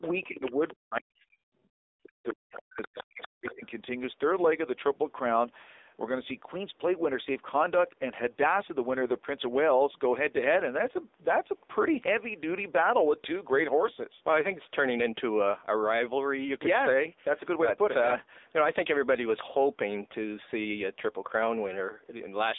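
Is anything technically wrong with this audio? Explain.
Yes. The speech carries plainly audible mobile-codec damage throughout, and the first few seconds show echo-canceller trouble.

AMR narrowband mobile codec: throughout the clip, nothing passes above about 3.8 kHz. The buzzy, synthetic texture points to a low AMR-NB mode, around 8 kbps.

Speech suppressed in double talk: from 0.0 to 3.63 s, the talker dips sharply, near silence at worst. This is likely the canceller ducking the talker while the far side speaks.

Other side's voice leaking through: from 0.02 to 0.74 s and from 2.24 to 3.66 s, a second voice sounds faintly, about 20 dB and about 15 dB below the speech. It is the far side's loudspeaker audio, likely left by incomplete echo cancellation.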